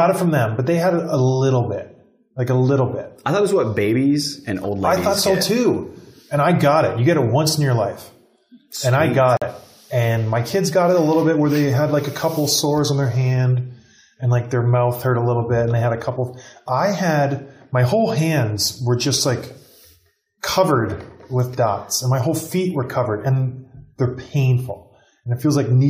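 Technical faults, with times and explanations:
9.37–9.43 s, corrupt frame muted: the sound drops abruptly into total silence for about 55 ms, then resumes with timing intact. Damaged compressed data was rejected by the decoder and the player filled the gap with silence, which fits two lost frames.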